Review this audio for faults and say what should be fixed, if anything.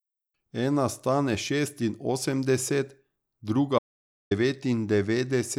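The speech has an audio dropout to silence from 3.79 s to 4.31 s, losing about 0.52 s. The sound stops abruptly mid-flow and resumes just as abruptly, and the gap is silent with no room tone, most likely because the input signal was briefly lost while recording continued. That dead floor separates it from a natural pause or a noise gate, which leave faint background. Secure cables and wireless links, and monitor input levels while recording.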